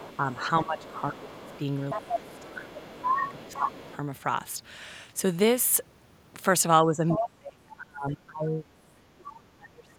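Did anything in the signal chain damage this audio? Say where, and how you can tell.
Yes. Other side's voice leaking through appears from 0.0 to 3.97 s, a second voice sitting roughly 10 dB under the talker, and again briefly from 7.08 to 7.26 s at only about 5 dB below. This points to the call-processing stage. The far end was played on a loudspeaker and picked up by the microphone, and the echo canceller likely failed to model and subtract that path fully, so residual echo passed through.

Speech suppressed in double talk hits the talker from 0.19 to 1.53 s, 1.95 to 3.94 s, 6.84 to 8.69 s and 9.09 to 9.98 s. The level sinks by around 15 dB in the first two stretches and by roughly 30 to 35 dB in the last two. The likely cause is the same echo canceller misjudging simultaneous talk as echo and attenuating everything, which pulls the wanted voice down along with the leakage.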